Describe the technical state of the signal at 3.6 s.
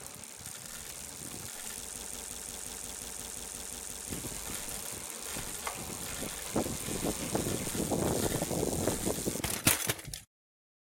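At 3.6 s you're in the middle of a broken-record loop running from 1.95 to 4.10 s: a 0.18 s fragment of sound repeats exactly, back to back, twelve times. The likely cause is a stalled player or stream resending its last buffer, so the intended audio there is lost.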